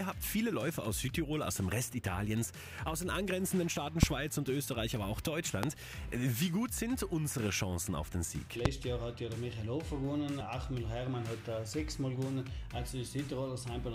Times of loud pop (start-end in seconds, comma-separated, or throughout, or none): 4.03-4.05, 5.63-5.66, 8.65-8.68